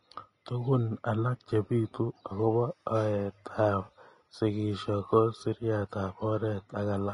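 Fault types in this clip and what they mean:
Vorbis compression: the speech has a plainly audible hissy, grainy treble and a roughened edge throughout, which points to low-bitrate Vorbis, likely around 30 kbps. At that rate the fine high-frequency detail gets quantised so coarsely that it turns into noise.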